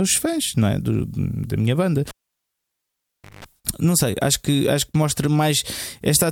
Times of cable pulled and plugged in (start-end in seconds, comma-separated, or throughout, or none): 2.08-3.44